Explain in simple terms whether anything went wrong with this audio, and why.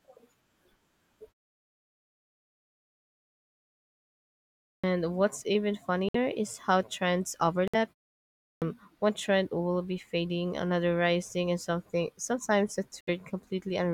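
Two faults affect this speech. The first is a clipped start after a pause: at 4.71 s and 8.49 s, just before "one trend will be", the opening eighth of a second is lost as the output device wakes. A Bluetooth stall causes short silences of about 60 to 70 ms at 6.09 s, 7.68 s and 13.01 s. The likely cause is the headphones' buffer running dry while packets were delayed.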